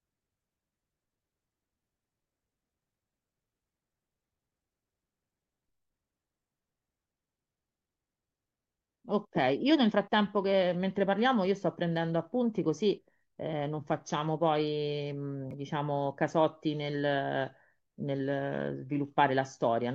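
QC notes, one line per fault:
12.97 s and 15.51–15.54 s, compressed frames skipped: at each point a short stretch of speech, roughly 40 ms, never plays because whole compressed frames were missing or refused as damaged. The audio jumps forward.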